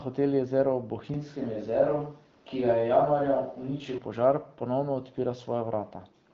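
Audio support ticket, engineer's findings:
Switch to a distant microphone, 1.14 to 3.98 s. Sound turns roomy and hollow abruptly, bass thins, little level change, faint room noise well below the speech. Likely the close mic dropped and a far pickup took over. Abrupt return just before "požar ponovno". Throughout, AMR-WB HD Voice at 12.65 kbit/s caps content near 7.4 kHz, with light coding texture.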